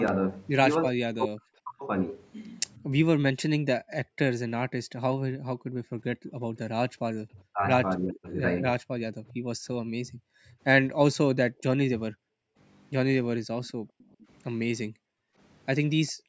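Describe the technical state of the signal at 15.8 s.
At 15.8 s the background is gated by the echo canceller: from 13.74 s to 16.29 s the canceller, reacting to loudspeaker playback, pulls the microphone down by as much as about 40 dB. Over roughly a second in total, the room sound dips or vanishes. A spectrogram shows the broadband noise floor collapsing into dark gaps, and the waveform shows near-flat stretches.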